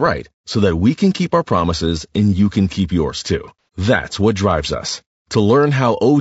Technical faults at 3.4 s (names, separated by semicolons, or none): low-delay AAC compression; AAC frame loss with concealment